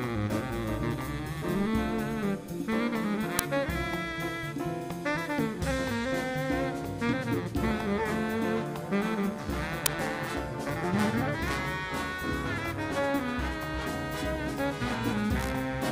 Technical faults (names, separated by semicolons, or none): uninitialised buffer